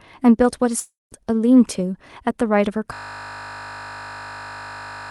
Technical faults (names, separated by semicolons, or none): long network dropout; system hang loop